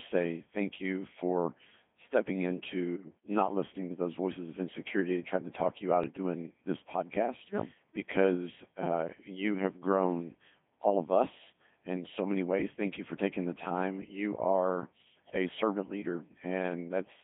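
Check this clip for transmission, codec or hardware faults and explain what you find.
Two faults are present: the speech runs through a very low-rate vocoder for the whole clip, and a short burst of bit errors corrupts it near 3 s.

Codec 2 vocoder, throughout: the voice is rebuilt from pitch, voicing, energy and a spectral envelope, then resynthesised from sine waves. The damage is heavy, with a robotic, buzzy tone in a band of about 150 Hz to 3.5 kHz, which fits the 2.4 kbit/s mode. Unlike ordinary low-bitrate codec smearing, the original waveform is gone entirely.

Bit errors on digital voice radio, 2.96 to 3.10 s: a handful of frames receive flipped bits at an error rate of a few percent. Each corrupted bit misdirects pitch, level, voicing or spectrum for a whole frame, so the voice jumps into warbles and bleeps. Packet loss would leave gaps or repeats instead.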